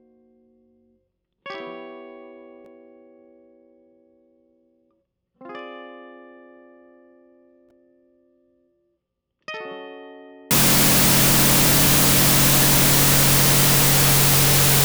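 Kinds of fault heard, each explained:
Wrong sample width: from 10.51 s to the end at 14.84 s, the music sounds like data written as 32-bit floats being read back as 16-bit integers. Each real sample is split into two fake ones, one of them built from meaningless low-order bytes. That halves the playback speed, dropping the pitch an octave, and buries a trace of the music under loud, harsh noise.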